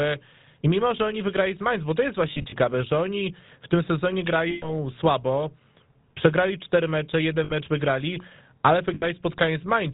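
The whole speech clip has passed through the GSM full-rate codec, running at 13 kbps. The damage is plainly audible. The codec models the vocal tract and excites it with a sparse, regular pulse train. Much fine detail is thrown away. Nothing above 4 kHz survives. The voice sounds buzzy and gravelly, with a dull, boxed-in top end.

Lost GSM frames break in four times. From 2.32 to 2.53 s, gaps totalling 120 ms are scattered over about 200 ms, in short runs of around 40 ms at most. After "oni w tym sezonie", from 4.5 to 4.69 s, 120 ms is lost. Between "przegrali cztery mecze" and "wygrali ale", at 7.44 to 7.52 s, 60 ms goes. After "wygrali ale", at 8.94 to 9.04 s, 80 ms goes. These spans fit missing 20 ms frames. Each gap is filled by repeating the last good frame. It is heard as a brief rough, metallic ring.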